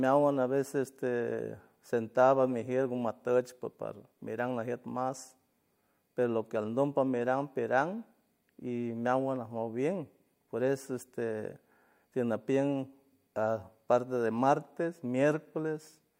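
Nothing stood out on listening to the speech in this recording.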